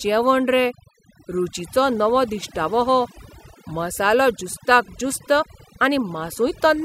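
Overdone noise removal runs through the whole recording: the noise reduction was set so hard that any frequency band sitting near its noise estimate is pulled right down, taking quieter parts of the speech too. Pauses drop to near silence dotted with twinkling specks.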